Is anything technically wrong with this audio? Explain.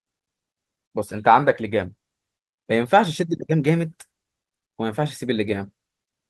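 No, nothing technically wrong.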